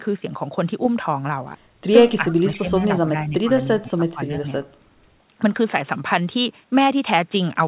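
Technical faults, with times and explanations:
2.19 to 2.86 s, 3.04 to 3.5 s and 3.8 to 4.47 s, speech suppressed in double talk: the speech dips in level, by about 20 dB, 10 dB and 20 dB at the deepest. The dips affect about 500 ms, 400 ms and 500 ms in total. The likely cause is an echo canceller that mistook overlapping talk for echo and turned everything down.
2.29 to 2.33 s, echo leak: a faint, brief scrap of delayed voice sits about 25 dB below the speech. It trails the original by 332 ms. This is likely loudspeaker sound that the echo canceller failed to remove and then sent back.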